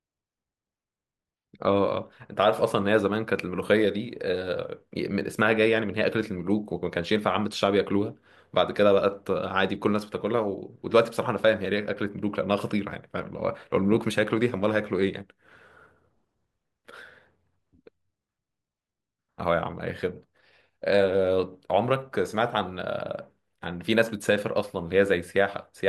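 No technical faults are audible.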